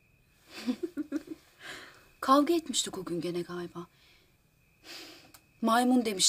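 No technical faults can be heard anywhere in the audio, and the signal stays steady and intact throughout.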